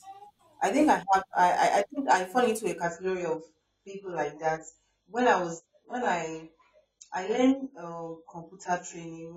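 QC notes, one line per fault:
2.82 s to the end: adaptive stream at a lower bitrate. The speech switches abruptly, with no gap, from a fuller AAC rendering to a much thinner one, which fits a drop from roughly 96 kbit/s to 16 kbit/s. Nothing survives above 7.6 kHz, so sibilance loses its edge, and the coarser quantisation adds swirly, watery artefacts. The player fell back to a cheaper stream variant when throughput dropped, and it never recovers before the clip ends.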